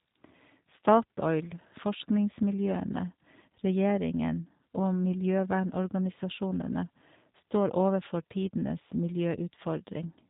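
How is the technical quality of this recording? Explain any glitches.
The recording is held back by low-bitrate voice coding throughout. Across the whole speech clip the G.729 codec, here the G.729A variant, is plainly audible. It rebuilds speech from a vocal tract filter, a pitch predictor and a few pulses per frame. The result is intelligible but rough and synthetic, with nothing above 4 kHz, carried in an 8 kbit/s stream. A simple telephone band-limit would sound dull but natural. This has a buzzy, model-built grain instead.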